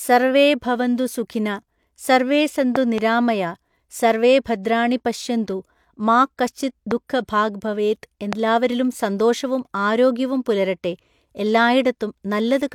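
Loud pops jump out of the speech three times: a quick double pop from 2.76 to 3.00 s, then single ones at 6.91 to 6.93 s and 8.33 to 8.35 s, each peaking roughly 15 dB above the talking, which carries on underneath. A voltage spike from a plug, switch or static discharge is the likely cause.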